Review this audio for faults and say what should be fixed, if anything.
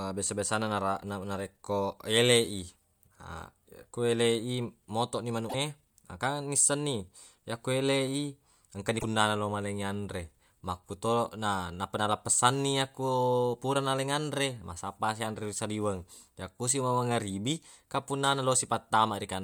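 Two short garbled bursts break the speech, from 5.49 to 5.55 s and from 8.99 to 9.04 s. At each one the audio skips forward abruptly, and the roughly 50 to 65 ms that follow come out garbled, about two 24 ms frames' worth. The likely cause is a broken MP3 bit reservoir: frames went missing, so the next frames reached back for borrowed data and decoded bytes belonging to a different frame. To prevent this, cut or splice MP3 streams only at reservoir-safe points, or decode to PCM before editing and re-encode once.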